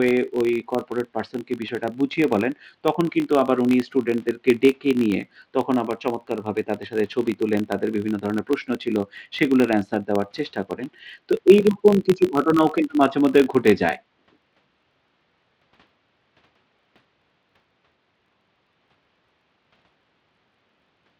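A filter restarted on every block runs throughout the speech. The filter loses its memory at each block boundary and begins again from zero, leaving a small transient every time. The result is a buzz at about 46.9 Hz, rising and falling with the speech level, which fits a 1024-sample block.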